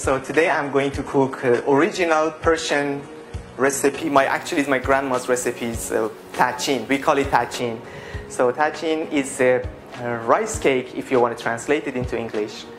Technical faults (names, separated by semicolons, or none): adaptive stream starting at a low bitrate; de-emphasis applied wrongly